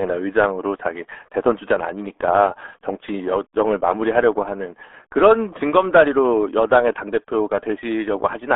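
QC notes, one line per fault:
Throughout: RealAudio 14.4 codec. The speech has been squeezed through a low-rate dial-up speech codec, consistent with RealAudio 1 running at about 8 kbit/s. It keeps only a telephone-like band of roughly 300 Hz to 3.5 kHz and discards everything above 3.8 kHz, so the sound is dull, thin and boxy. The codec also has too few bits to model the voice accurately, which causes heavy damage: a muffled, gargling, watery quality.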